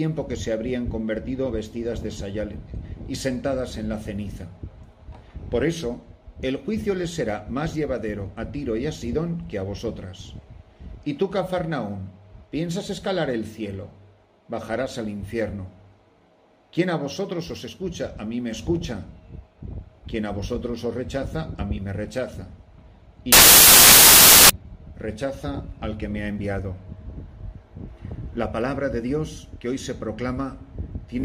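Samples built from the wrong bytes take over the audio from 23.32 to 24.50 s, a stretch of about 1.2 s. Across that span the reader is misassembling each sample's bytes, whether by a one-byte offset, a reversed byte order or a wrong alignment assumption, so the rapidly fluctuating low-order bits land in the most significant position. The result is a burst of loud, harsh broadband noise.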